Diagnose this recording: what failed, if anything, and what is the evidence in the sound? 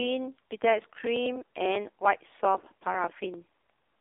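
The speech passed through an AMR narrowband mobile codec at a low bit rate, and the damage is heavy throughout. Nothing remains above 3.7 kHz, and the usable band runs from roughly 250 Hz to 3.6 kHz, which fits 8 kHz telephone sampling. The voice has the buzzy, synthetic texture that points to a rate near 6 kbps, where the codec rebuilds speech from a coarse vocal-tract model driven by only a few pulses per 5 ms subframe.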